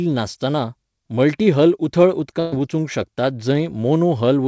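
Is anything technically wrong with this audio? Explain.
Yes. From 2.40 to 2.54 s there is a burst of packet loss. About 120 ms of audio never arrived in time, so the receiver stretched the last sound and faded it, giving a held buzz or dying hiss before the sound jumps ahead. On a spectrogram the harmonics freeze into flat, weakening horizontal bands. The waveform shows a decaying repeated cycle rather than silence, ending in a sudden seam. The call path shows as its usual coding noise and a band edge at 8 kHz, which fits G.722.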